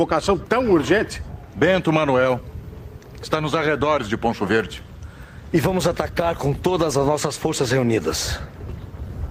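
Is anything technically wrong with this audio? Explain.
Yes. From 6.12 s to the end at 9.31 s there is a call bitrate drop. The encoder's rate falls from 40 kbps to about 18 kbps when the call's bandwidth estimate shrinks, and it stays at that low rate for the last 3.19 s. With fewer than half the bits, the codec quantises more coarsely and trims the upper frequencies. The audio turns rougher and duller, with a watery, muffled texture that does not recover before the clip ends.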